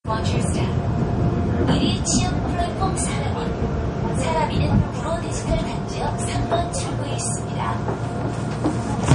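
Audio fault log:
Throughout, MP3 compression. Nothing is heard above about 10.1 kHz, so the treble stops at a hard ceiling. The damage is plainly audible as a watery, swirling texture on these everyday sounds. The likely cause is MP3 encoding short of bits, which fits a low bitrate near 40 kbps. The encoder cuts the top band at a fixed frequency. It also drops weak frequency lines, which flicker on and off between frames and cause the swirl.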